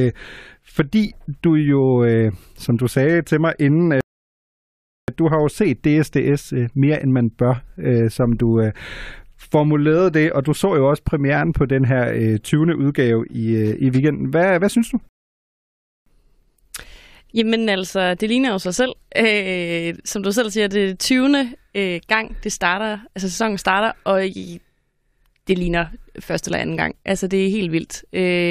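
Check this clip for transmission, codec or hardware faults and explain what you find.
Two rebuffering stalls interrupt the speech, at 4.01 to 5.08 s and 15.09 to 16.06 s. Each time, the player exhausted its downloaded audio and waited for more. The sound drops to silence for about 1.1 s, then about 1.0 s, and resumes exactly where it stopped.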